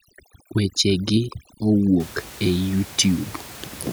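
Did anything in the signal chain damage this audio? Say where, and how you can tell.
Yes. From 0.00 to 2.00 s the speech shows overdone noise removal, a call-processing stage set far too aggressively. The gaps drop to near silence with twinkling specks, and the speech loses its quieter components as they get gated out with the noise estimate. A spectrogram shows isolated flickering bins scattered through a blank background. After 2.00 s the room noise, about 19 dB below the speech, returns as a steady even floor.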